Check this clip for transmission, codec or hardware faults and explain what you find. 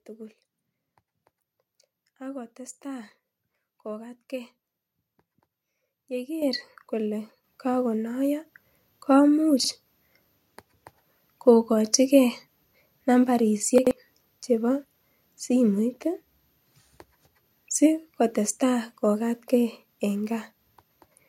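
Two kinds of fault are present: repeated microphone volume steps and chunks out of order.

Microphone volume stepped up at 6.42, 7.44 and 8.46 s, by about 8, 5 and 4 dB. The call software's automatic input-gain control raised the device's input volume in discrete steps, so the speech and the background noise jump louder together at each point.

Chunks out of order at 9.60 s and 13.78 s. Segments of about 43 ms were played late, one chunk late at the first point and two at the second. The sequence is disrupted for roughly 85 ms and 130 ms. The speech sounds briefly jumbled.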